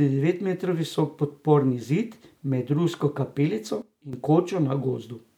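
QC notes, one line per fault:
3.82–4.13 s, sudden gain jump: the digital gain was likely switched in one sample step with no ramp, dropping the level by about 12 dB for this span. Speech and background noise fall together at once, then return just as abruptly at 4.13 s.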